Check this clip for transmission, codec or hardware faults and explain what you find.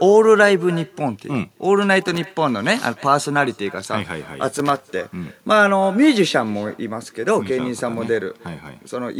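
Two faults are present: echo with no canceller throughout, and loose connector crackle twice.

The far end's loudspeaker feeds its microphone and nothing cancels it, so the speech returns roughly a third of a second later as a faint, thin copy about 23 dB down.

From 2.02 to 2.33 s and again from 4.54 to 4.81 s, loose connector crackle occurs as an intermittent contact chops the signal, producing irregular bursts of scratchy crackle.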